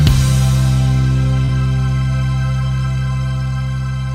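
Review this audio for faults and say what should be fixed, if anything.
Short concealed packet loss at 1.45 to 1.50 s. Around 20 ms of audio failed to arrive at the decoder in time, so the receiver extended the preceding sound to cover the gap, carrying its periodicity forward or substituting shaped noise, across about 28 ms before crossfading into the real signal again. The result is a brief smeared, wobbly patch where the original detail is lost. Prevent this with a larger adaptive jitter buffer and forward error correction on the link.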